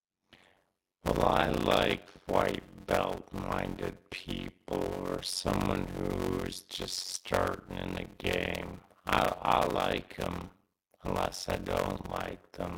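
From start to end, the speech carries a steady buzz near 92 Hz and drags along at roughly 0.53 times normal speed while keeping its timbre. This is a block size mismatch (padded): each short block, which fits 256-sample writes, is zero-filled to a longer read size.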